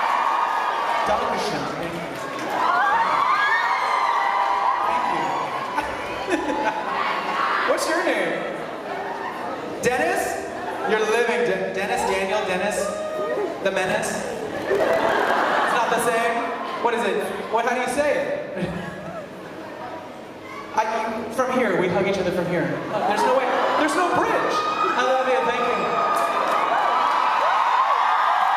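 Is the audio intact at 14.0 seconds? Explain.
No. From 13.84 to 15.31 s there is a block size mismatch (padded): each block written holds 1024 samples but the next stage reads longer ones, which fits about 1152, and the shortfall is filled with silence. The sound buzzes at 38.3 Hz and plays at 0.889 times speed. A waveform shows short near-silent runs repeating every 26 ms, and a spectrogram shows evenly spaced thin vertical gaps.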